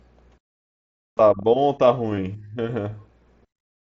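Concealed Bluetooth headset packet loss at 1.16 to 1.19 s and 2.16 s: lost voice packets are patched by repeating recent waveform, leaving brief buzzy, slightly warbled blips in the speech.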